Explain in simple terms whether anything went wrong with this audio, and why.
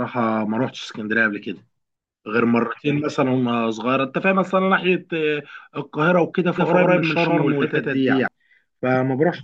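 Doubled audio track from 6.58 to 8.28 s: the speech is heard twice, an equally loud copy trailing about 150 ms behind, likely from a second, slower recording path.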